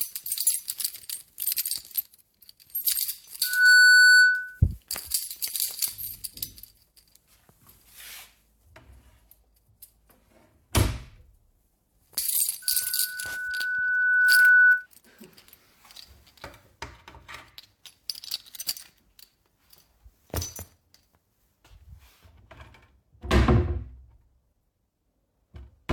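A piercing 1.5 kHz tone rises well above the sound, swelling almost instantly at 3.43–4.60 s and gradually over about two seconds at 12.62–14.87 s. This is loudspeaker feedback squeal: the microphone picks up its own loudspeaker, and that frequency keeps re-amplifying.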